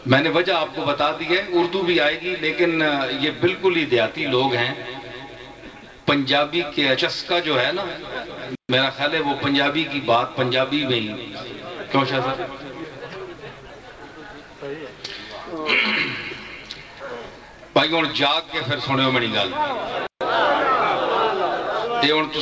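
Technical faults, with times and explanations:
No technical faults turn up anywhere here; the sound has just come over a WebRTC call path, and its top end stops at 8 kHz, which fits a G.722 codec running at 64 kbps.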